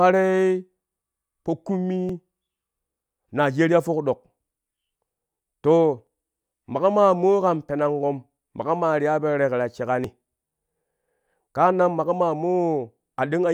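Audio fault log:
2.09 s, 6.07 s and 10.04 s: audio missing between chunks. The recording likely works in 4-second blocks and drops a small slice each time one block closes and the next opens, with the two edges butted together and no gap left in place. Each skip is about 30 ms of speech gone, so the sound lurches slightly forward at those three moments, evenly spaced about 4 seconds apart, clipping a fragment of whatever sound falls across each join.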